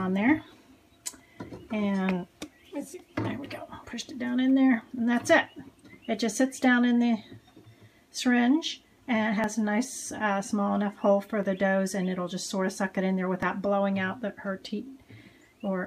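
The recording was most likely processed in chunks of about 2 s, and at each handover a few milliseconds went missing before the next chunk was spliced straight on, which is audio missing between chunks. The sound jumps at 3.46, 5.45, 9.44, 11.43, 13.43 and 15.42 s. Each skip is brief and the two sides meet without any silence, so the discontinuities fall into a steady two-second rhythm.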